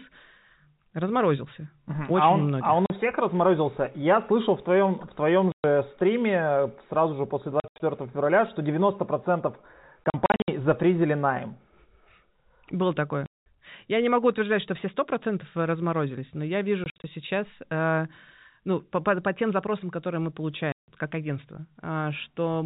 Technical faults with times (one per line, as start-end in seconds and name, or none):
2.86-2.90 packet loss filled with silence
5.52-5.64 packet loss filled with silence
7.60-7.80 packet loss filled with silence
10.04-10.48 packet loss filled with silence
13.26-13.46 packet loss filled with silence
16.84-17.04 packet loss filled with silence
20.72-20.88 packet loss filled with silence